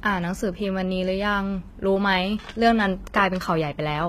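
Across the whole speech clip, the treble sounds synthetic: s sounds come out gritty and lispy, and nothing is present above 14.9 kHz. That points to HE-AAC compression as the likely cause, at a low rate near 20 kbps. Unlike a plain low-pass, the upper band here is rebuilt from copied lower bands rather than simply missing.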